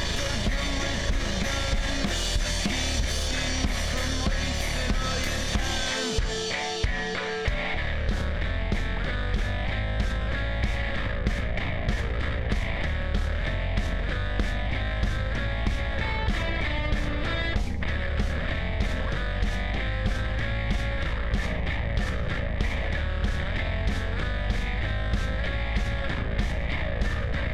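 No technical faults can be heard anywhere in this audio.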